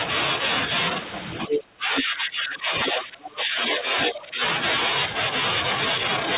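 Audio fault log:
1.35–1.59 s, 1.97–2.03 s, 2.86–3.01 s, 3.71–3.83 s and 4.01–4.19 s: other side's voice leaking through. A second voice breaks in as short scraps. The first is about as loud as the talker, and the later ones are quieter. Likely cause: loudspeaker echo that the canceller left in.
1.48–2.73 s and 2.9–4.42 s: speech suppressed in double talk. The talker dips by up to about 20 dB, then about 15 dB, for roughly a second and a second and a half. Both sides overlap here. The canceller likely turned everything down at once.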